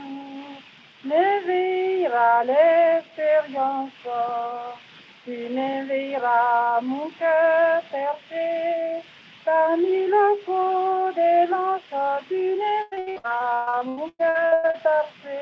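From 12.82 s to 14.76 s the sound breaks into repeated packet loss, heard as a choppy stutter with pieces missing. Well over a dozen gaps arrive in quick succession, the longest about 129 ms. Each is patched by stretching the preceding sound, so about half of the stretch is concealment. On the waveform this shows as a run of repeated, flattened segments. On the spectrogram, smeared horizontal bands sit in the holes, all capped at the 8 kHz ceiling that fits a wideband call codec.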